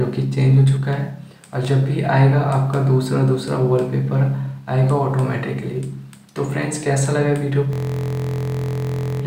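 At 7.73 s the audio locks up in a system hang loop that runs until 9.22 s. The machine or its driver stalled, but the sound hardware kept replaying the same stretch of its ring buffer, a 23.22 ms slice that fits a 1024-sample buffer. That slice repeats 64 times, which you hear as a rigid, mechanical buzz at about 43.1 Hz in place of the sound. Essentially nothing gets skipped in the process.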